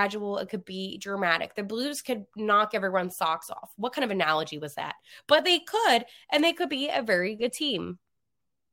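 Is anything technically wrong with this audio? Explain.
No, nothing technically wrong is audible in this recording.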